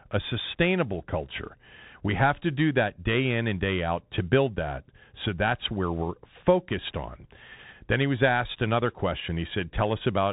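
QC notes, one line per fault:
Throughout: Bluetooth CVSD headset codec, nothing above 3.8 kHz; the one-bit adaptive step lags loud high sounds, making s sounds scratchy over granular hiss.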